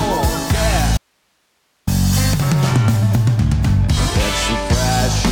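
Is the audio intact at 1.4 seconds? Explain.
No. An audio dropout to a faint residue runs from 0.97 to 1.87 s. The signal likely vanished while the path stayed live, leaving only hiss, roughly 50 dB down.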